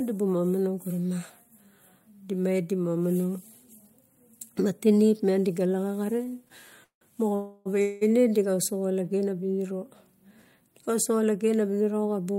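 From 6.17 to 7.03 s the speech stutters through repeated stalls: the jitter buffer ran dry five times as packets arrived too slowly, and each gap was bridged by continuing the last sound, about 257 ms in all, the longest 173 ms. Nothing is lost, but roughly 30% of that stretch is filler. A spectrogram shows smeared, frozen bands; the waveform shows flattened stretches.

Two call audio freezes follow, at 7.35 to 7.67 s (303 ms) and 7.81 to 8.03 s (198 ms). In each, the sound holds as a fading buzz or hiss with no silence and then resumes where it stopped, likely from packets held up in transit. They appear as horizontally stretched, decaying bands.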